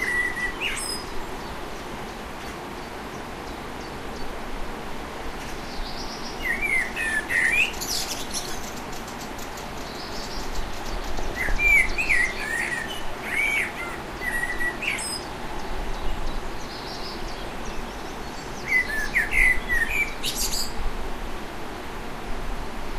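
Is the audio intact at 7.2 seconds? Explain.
No. At 7.2 seconds you're right inside a burst of DAB burbling that runs from about 6.96 to 7.64 s. Bit errors slipped past error correction into the MP2 data, so individual sub-bands lurch in level frame to frame, putting short blips of noise and jumps in level over the sound.

Underneath that, there's MP2 compression that's plainly audible across the whole clip. Starved sub-bands switch off and flicker, leaving the top end dull and the rest grainy and gurgly. That's likely down to a low bitrate, something in the region of 80 kbps.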